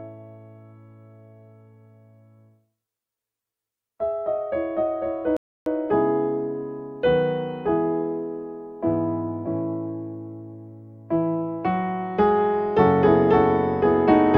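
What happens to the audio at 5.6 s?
At 5.6 s you're right in the middle of a rebuffering stall, which runs from about 5.37 to 5.66 s. The player simply ran dry of downloaded audio and sat waiting for more to arrive, so the sound drops to dead silence for roughly 0.3 s, then picks up exactly where it left off. Nothing gets skipped or chopped out; the gap just pushes everything after it about 0.3 s later.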